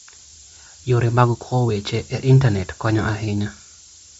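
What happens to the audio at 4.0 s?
At 4.0 s, as throughout the clip, the speech is carried on low bit depth with noise shaping: about 6 bits, with rounding error pushed upward, leaving a loud, thin hiss rising toward the top.

The band also stops dead at 7.7 kHz, and the upper speech sounds grainy and breathy, plainly damaged. That points to likely Bluetooth LC3 compression at a low bitrate, around 32 kbps.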